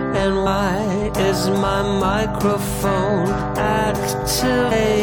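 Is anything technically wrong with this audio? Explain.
Yes, there are compressed frames skipped at 0.45, 3.40 and 4.70 s. Roughly 200, 100 and 200 ms of sound vanish, so the audio jumps ahead at each point.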